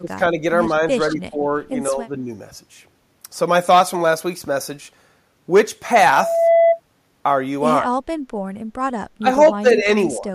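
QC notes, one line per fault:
0.0–0.43 s, 0.82–1.44 s, 1.9–2.3 s, speech suppressed in double talk: the speech repeatedly sinks in level, by about 15 dB at worst and only slightly in the third dip, which likely comes from an echo canceller that can't separate this talker from loudspeaker echo while both sides speak and so turns everything down.
7.81–7.89 s, 9.18–9.28 s, 9.55–9.95 s, 10.18–10.31 s, speech suppressed in double talk: shorter, choppier dips, one nearly cutting out (about 30 dB), again likely the canceller ducking overlapping talk.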